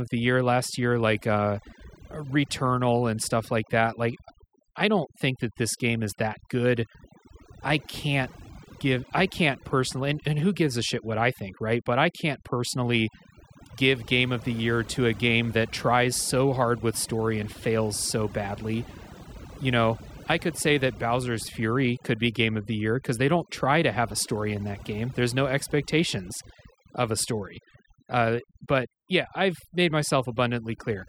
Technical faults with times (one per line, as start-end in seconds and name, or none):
0.00-31.09 overdone noise removal